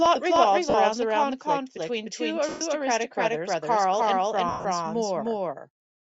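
All the way through the speech there's a doubled audio track. A second full-band copy sits roughly a third of a second behind the original at about the same level, so everything has a hard, flat slapback with no room colour or decay. That's likely a second capture through a slower path, or an edit that left two copies out of step and mixed them together.

On top of that come lost LE Audio frames. The first is short, from 0.70 to 0.74 s, right after "plot revolves" and before "the conflict between two". Its 40 ms fits four 10 ms frames. Each gap gets patched with the previous spectrum with random signs, so you hear a brief noisy smear instead of clean tone. The second, from 2.49 to 2.61 s just after "the conflict between two", lasts 120 ms and smears and fades toward silence. The last runs 4.49 to 4.65 s: 140 ms of loss scattered over 160 ms, with the longest stretch around 100 ms, so it sputters before dipping away.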